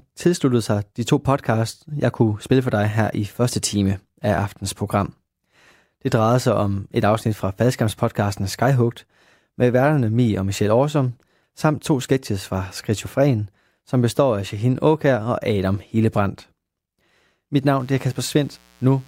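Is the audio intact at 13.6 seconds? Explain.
Yes, the speech at 13.6 seconds plays through intact, with no audible fault at that moment.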